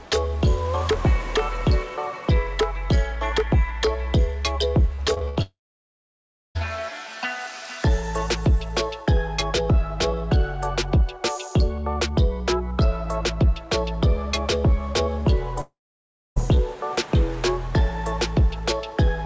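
From 4.96 to 5.38 s the sound turns choppy, with pieces audibly missing. This is repeated packet loss: five separate holes, the longest about 71 ms, each covered by stretching the last sound before the next hole arrives, so concealment fills roughly 38% of that stretch. Above it all, the band stops sharply at 8 kHz, which points to a G.722 call codec at 64 kbps.

Straight after, from 5.42 to 6.57 s, a short fading buzz or hiss collapses into about 1.0 s of silence before the sound resumes with that part gone. The same happens again from 15.61 to 16.38 s, this time with about 0.63 s of silence. Both are likely long network dropouts, where nothing arrived, the receiver briefly continued the last sound, then gave up until packets returned.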